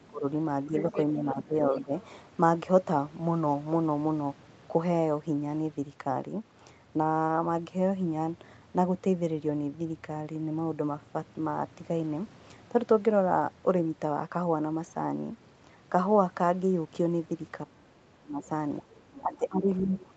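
Right from the start, 0.0 to 1.93 s, the speech dips and thins out in patches, adding up to roughly 0.7 s with the deepest drop around 15 dB. That's likely speech suppressed in double talk: both ends were talking, and the echo canceller couldn't tell the near talker from loudspeaker echo, so it pulled everything down. The same thing comes back harder from 17.64 s to the end, dropping by up to about 25 dB.

In and around those stretches you can pick out the other side's voice leaking through, faint and scrappy: 0.77 to 1.05 s and 1.72 to 2.05 s at about 15 dB under the speech, then 18.78 to 19.22 s at about 20 dB under and a brief bit at 19.96 to 20.05 s at about 25 dB under. The likely cause is echo the canceller didn't fully strip from the mic. All of it sits within the call path's normal top end of 8 kHz.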